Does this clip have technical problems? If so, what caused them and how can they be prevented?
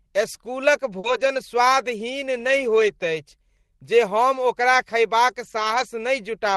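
Yes. Short concealed packet loss occurs from 0.99 to 1.05 s, just before "स्वादहीन नहि". About 40 ms of audio arrived too late to decode, so the receiver extended the preceding sound to fill the gap and then blended back into the real signal. The result is a brief smear or wobble. It differs from the error-correction repairs because nothing real was recovered; the audio there is guesswork extrapolated from what came before. A larger jitter buffer or a more stable network path would prevent it.

Lost packets rebuilt from error correction follow immediately, from 1.03 to 1.37 s. They recur at 2.87 to 2.89 s, just after "स्वादहीन नहि", and again from 5.43 to 5.85 s. Here the next packet carried a low-bitrate backup copy, so the decoder filled each gap with real but coarser audio. These stretches sound rougher and noisier rather than smeared. The longest spans involve several separate lost packets, nine and eleven. 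Within the Opus call path's roughly 12 kHz ceiling, the repaired frames stand out mainly through their added grit. Reducing packet loss on the network, or raising the bitrate so the backup copies carry more detail, would prevent or soften them.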